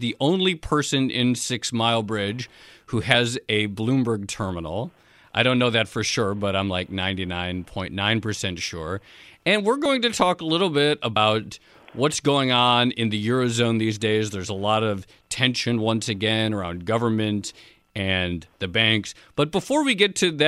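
Compressed frames skipped at 3.14 s, 9.85 s (just before "to talk a little") and 11.16 s (just after "talk a little bit"). Missing or rejected frames make the speech jump ahead by about one 26.1 ms frame, and by about two at 11.16 s.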